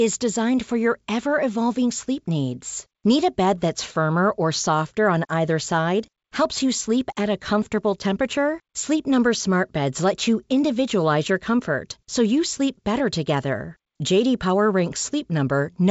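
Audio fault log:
No fault to log: the speech comes through G.722 wideband telephone coding at 64 kbit/s, with nothing above 7.7 kHz.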